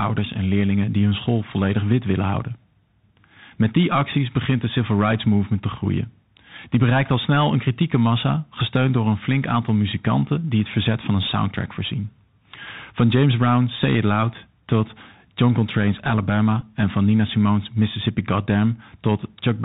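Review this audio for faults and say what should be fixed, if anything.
The whole clip carries the Bluetooth CVSD headset codec, and its damage is plainly audible. The sound points to the 64 kbps one-bit delta scheme: each sample only nudges the level up or down by an adaptive step, so fast loud high content outruns the step and distorts, s sounds turn scratchy, and a granular hiss sits under the speech. On a spectrogram, energy stops sharply at 4 kHz, with a grainy noise floor filling the gaps between words. Prevention: use a wideband headset profile such as mSBC, or record through a wired microphone.

At 16.61 s, just before "en van", a Bluetooth headset packet was repeated. For about 11.2 ms the chip decoded the previous packet's bits again instead of the missing audio, which fits roughly three lost packets in a row. Repeats spaced 3.75 ms apart form a brief burst near 267 Hz, short enough to come across as a tick or tiny buzz. 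In the waveform, a short stretch repeats the same cycle shape; on a spectrogram, evenly spaced vertical lines appear. Prevention: shorten the headset-to-phone distance and reduce 2.4 GHz interference.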